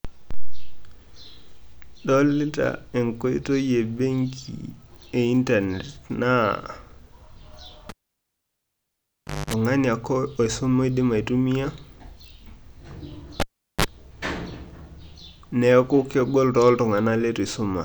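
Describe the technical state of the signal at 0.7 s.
The speech signal at 0.7 s is intact, with no technical fault present at that moment.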